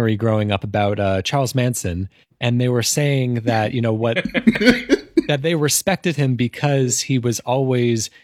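At 4.55 to 4.58 s, just after "that you know what", there is an overlap between stream segments. Two pieces of the stream claimed the same stretch of time. The player dropped the shared part, though that audio was never actually repeated. About 25 ms of speech is lost, and the waveform jumps across the gap. It sounds like a tiny skip forward. The stream is cut into 6-second segments.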